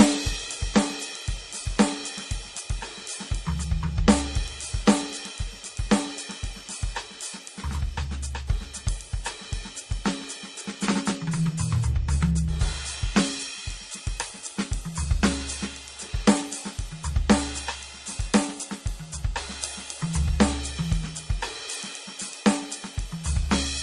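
From start to finish the music sounds dull, with nothing above 12 kHz, and two kinds of coding grit overlap. That layered texture points to transcoding between lossy codecs, likely an MP3 stage around 40 kbit/s re-encoded to Opus near 32 kbit/s. The second encoder spends its bits reproducing the first one's damage, adds its own, and keeps the low cut-off.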